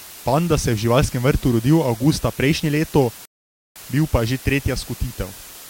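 A speech recording carrying low bit depth with dither throughout. At 6 bits, the rounding error becomes a steady, even hiss roughly 20 dB below the speech, with none of the gritty distortion undithered quantisation would produce. At 3.25 s a rebuffering stall cuts to silence until 3.76 s, then resumes exactly where it stopped at "bil pa", adding about 0.5 s. Unlike a dropout, no audio is lost.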